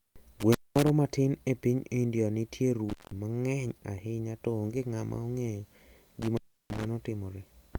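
Intermittent contact cuts the speech at 0.40–0.90 s, just before "matin e piny", then at 2.89–3.11 s and 6.22–6.85 s. A loose connection opens briefly. Sound drops to faint hiss, crackling at each edge.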